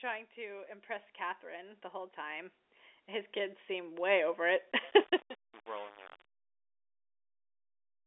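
Telephone-band speech, limited to about 3.8 kHz by G.711 coding, with automatic gain rising from 0.34 s to 4.48 s: the level climbs by about 15 dB as the control lifts a quiet input, and the background swells with the speech. That shared swell of voice and background is what marks it as automatic gain rather than a change in the talker's own level.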